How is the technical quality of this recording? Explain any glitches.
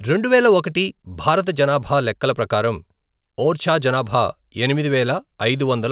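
No glitches turn up anywhere in this speech recording, which simply carries the narrowband sound of a call path with nothing above 4 kHz, consistent with G.711 mu-law coding at 64 kbps.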